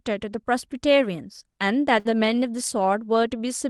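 At 1.99 s, a burst of packet loss interrupts the speech until 2.07 s. The receiver stretched the last sound for about 54 ms, fading it into a held buzz or hiss. About 60 ms of speech is skipped, and the voice resumes further on. Through the call path, the audio's ceiling around 12 kHz fits an Opus codec.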